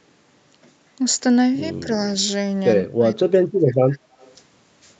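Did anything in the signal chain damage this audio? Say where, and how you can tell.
Yes. At the call-processing stage, the echo canceller most likely mistook simultaneous talk from both ends for echo and turned the speech down. The speech dips by about 10 dB at 1.8 to 1.89 s, then is cut by about 30 dB from 2.82 to 4.14 s: speech suppressed in double talk.

Echo leak, also from call processing: the echo canceller likely failed to remove all of the loudspeaker sound its microphone picked up. From 4.19 to 4.34 s a faint copy of the voice returns 138 ms late, about 35 dB below the main speech.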